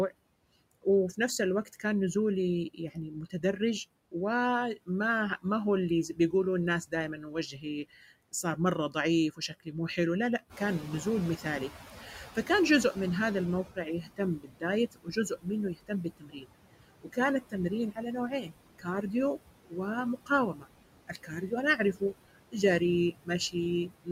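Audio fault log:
Throughout: noise suppressor artifacts. The background is pulled down by about 21 dB wherever the suppressor judges a band to be steady noise, recalculating frame by frame. The gaps between phrases sink toward silence, and the noise climbs back under the speech, so the residue seems to pump and flutter. On a spectrogram the noise floor shows as patchy, flickering islands instead of an even haze. In the waveform the pauses look unnaturally flat next to the speech.
0.82–2.15 s, 2.74–4.14 s, 4.76–5.45 s, 6.87–10.84 s, 12.35–12.97 s, 13.65–19.13 s and 19.66–24.09 s: speech cut by the noise suppressor. The suppressor treats parts of the speech as noise and turns them down with the background. The deepest cuts are about 9 dB near 12.4 s and about 13 to 22 dB elsewhere. Soft consonants and endings sound swallowed. The early spans each lose a fraction of a second. Around 14 to 19 s nearly two seconds in total go faint, and after 19.7 s about a second does. 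A spectrogram shows holes punched out of the high-frequency consonant energy, and the waveform shows syllable tails clipped short.
10.49–13.62 s: noise suppressor catching up. The room noise steps up by about 11 dB near 10.5 s and then sits roughly 12 dB below the speech. The suppressor's noise estimate lags behind this jump, so the louder background first comes through with less reduction. It then fades over roughly 3.1 s until the cut reaches about 14 dB. On a spectrogram the noise band brightens abruptly and then darkens gradually. In the waveform the floor between phrases thickens and slowly shrinks.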